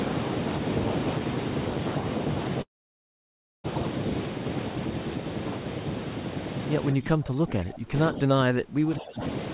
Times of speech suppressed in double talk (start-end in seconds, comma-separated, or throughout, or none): 6.93-9.22